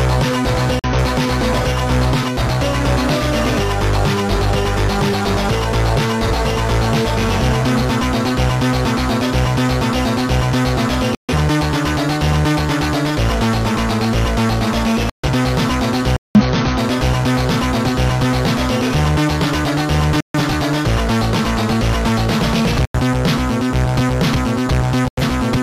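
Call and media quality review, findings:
Corrupt frame muted: bit errors in compressed frames caused decoder rejects, and the player substituted silence. Abrupt dropouts at 0.79 s (0.06 s), 11.15 s (0.2 s), 15.10 s (0.2 s), 16.16 s (0.25 s), 20.21 s (0.19 s), 22.85 s (0.15 s) and 25.08 s (0.15 s). Gap lengths fit runs of roughly 50–65 ms frames. Timing holds after each gap.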